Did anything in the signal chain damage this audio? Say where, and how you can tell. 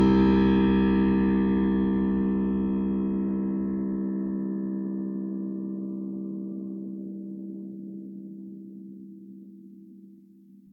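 Yes. The damage is at the codec stage, throughout the music. It sounds swirly, smeared and hollow, with blurred attacks, worse than one low-bitrate pass explains. That is generation loss, likely from about seven lossy re-encodes near 62 kbit/s. Each pass requantises on a shifted frame grid.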